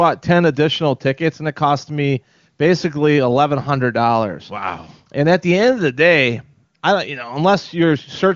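No faults found: the speech has the band-limited character of AMR wideband (HD Voice) coding, nothing above about 7.3 kHz and at most faint coding damage, which points to one of the codec's highest rates.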